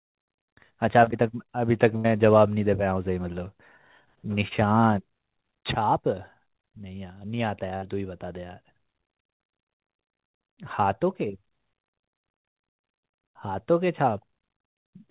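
At 1.04–1.09 s and again at 4.48–4.53 s there is short concealed packet loss. About 20 ms of speech never arrived, and the receiver bridged the gap with roughly 26–27 ms of extrapolated sound before blending back in. Each event is a brief smear or wobble in the speech.

At 1.97–2.06 s and 7.77–7.84 s there are bursts of packet loss. About 80 ms and then 60 ms of speech are missing, covered by 75 ms and 52 ms of continued, decaying sound. Each burst is heard as a held buzz or fading hiss, and the speech resumes with that stretch skipped.

All of this sits on a narrowband call path with nothing above 4 kHz, which fits G.711 mu-law.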